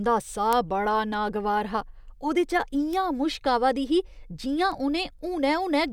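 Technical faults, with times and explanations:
0.53 s, 2.93 s and 4.72 s: bit error spike. A single flipped bit makes the sample value jump by a power of two and snap straight back. The first, just before "बड़ा नागवार हा", peaks at about -4 dBFS and lasts one sample. The second, just before "मुश्क आवा दी ही", is one sample at about -16 dBFS. The last spans two samples at about -28 dBFS. Each is heard as a sharp tick unrelated to the speech. On the waveform it shows as a lone vertical needle, and on a spectrogram as a thin full-height stripe.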